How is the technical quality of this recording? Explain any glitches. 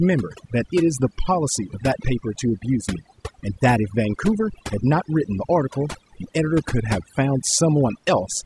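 The recording is compromised by overdone noise removal, present from start to finish. Between phrases the background drops and breaks up, dotted with twinkling specks. A noise reduction process was pushed too hard: it cuts individual frequency bands deeply whenever their level sits near its noise estimate, so quieter parts of the voice are stripped away along with the noise, leaving isolated flickering fragments.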